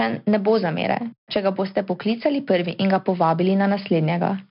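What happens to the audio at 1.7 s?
At 1.7 s, as throughout, the speech has gone through 4-bit ADPCM compression. Each sample is stored as a coarse adaptive step from a prediction, so heavy quantisation noise tracks the voice as gritty hiss. Nothing remains above 5.3 kHz, which fits a rate near 44 kbps.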